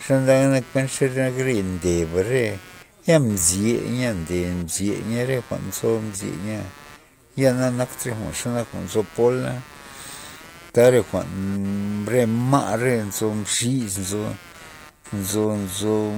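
A computer's changing workload is disturbing the shared ground of the audio circuit, injecting computer activity noise across the whole recording. As the processor, graphics card or mouse draw varying current, that ground reference shifts, and the shifts reach the signal path directly. Under the speech this sounds like a buzzy, chirping texture pulsing at somewhere around 150 times a second, sitting roughly 20 dB below the voice, and it rises and falls with the machine's activity rather than with the speech.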